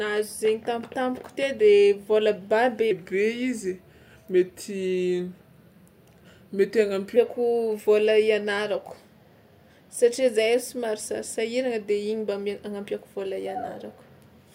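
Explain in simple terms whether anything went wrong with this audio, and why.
From 2.91 to 7.16 s, a section at the wrong speed: the speech plays at 0.86 times normal, slower and about three semitones deeper together, likely from the wrong playback clock.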